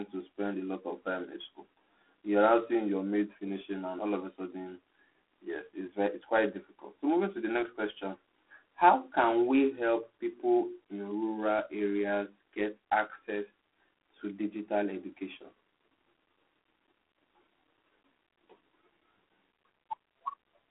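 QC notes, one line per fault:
throughout, G.726 ADPCM: the speech carries a harsh, rasping hiss that swells and fades with its level, and the sound is narrow and telephone-like, with the band running from about 250 Hz to 3.4 kHz and nothing above 3.9 kHz. The coder sends only a coarse difference between each sample and an adaptive prediction, and the rasp and its depth fit the 24 kbit/s mode, about three bits a sample, so quantising noise rides on the signal.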